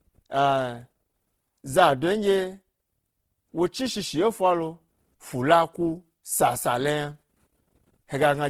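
Opus compression runs through the whole clip, from start to finish. The damage is plainly audible, and its character points to a low bitrate of around 16 kbps in the music (CELT) mode, likely the cause here. The encoder keeps each band's energy but lacks bits for detail, so it fills bands by folding lower content or injecting noise. The speech therefore sounds rough and grainy rather than swirly. The band still reaches about 20.2 kHz, so nothing is muffled.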